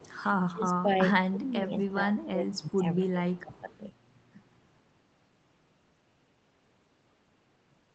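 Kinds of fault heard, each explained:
Echo leak: Short, faint repeats of the talker trail the original by a steady 249 ms, sitting about 25 to 30 dB down in brief scraps near 0.0, 1.8, 2.5 and 3.6 s, likely from a far-end loudspeaker leaking past its echo canceller. Unlike room reverberation, it is a distinct copy at a fixed lag, not a smooth decay.
Speech suppressed in double talk: The voice ducks by roughly 20 dB for about half a second at a time, four times between 0.46 and 3.69 s, likely while the far side was playing on the loudspeaker. It is a level dip that partly keeps the voice, unlike a packet-loss dropout's abrupt gap or glitch.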